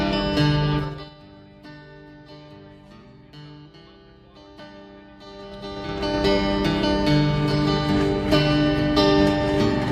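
Zipper noise marks two level moves: a drop of roughly 25 dB from 0.77 to 1.15 s, ticking at about twenty steps a second, and a rise of similar size from 5.21 to 6.19 s, ticking more slowly. Each 3 dB jump lands unsmoothed.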